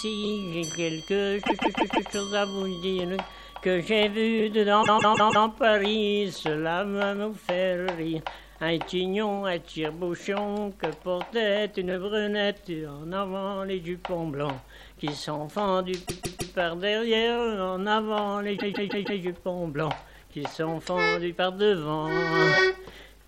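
At 1.45 to 2.08 s, 4.82 to 5.45 s, 16.05 to 16.52 s and 18.56 to 19.19 s, the sound stutters from repeated frames. A block of about 157 ms, which fits a run of six compressed frames, was stored or sent more than once. The decoder plays it four extra times, or three extra times at 16.05 s. Nothing is lost. Each stutter adds about 0.63 s, or about 0.47 s for the one at 16.05 s, which sets it apart from a dropout.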